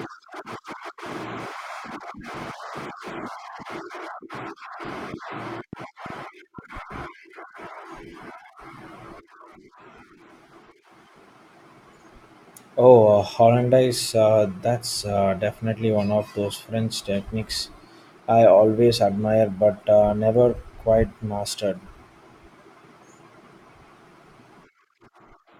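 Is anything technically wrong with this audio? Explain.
Yes. From 5.14 to 6.97 s a train of clicks runs over the speech: around seven short pulses, about 2.75 per second, spaced unevenly and roughly as loud as the speech itself. A nearby device or a faulty connection or power supply is likely injecting these pulses into the signal. Unlike random crackle or a single dropout, the clicks share one shape and form a distinct ticking sequence, audible in the pauses as well as under the speech.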